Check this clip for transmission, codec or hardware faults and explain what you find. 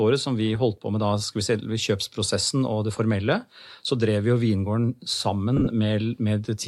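One transmission fault stands out, near the end of the speech.

Lost LE Audio frames, 5.57 to 5.68 s: about 70 ms of audio went missing, scattered across 100 ms, with the longest gap only a few tens of milliseconds, which fits roughly seven 10 ms frames. The LC3 decoder filled each gap by repeating the last spectrum with random signs, so the sound briefly turns into a noisy smear. The light lossy compression across the clip is part of the normal path.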